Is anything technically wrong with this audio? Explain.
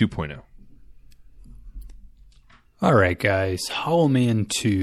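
Yes. Throughout the speech there is plainly audible watery, swirly distortion, likely MP3 compression at a low bitrate around 64 kbps. Weak frequency lines drop in and out between frames, showing as flickering spectrogram holes.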